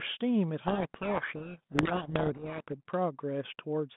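From 0.6 to 2.68 s, a codec payload misread: the receiver unpacks the G.726 code words with their bits in the wrong order. The difference values decode wrongly, burying the speech in harsh, rasping distortion until the packing matches again and the narrowband 32 kbit/s G.726 sound returns.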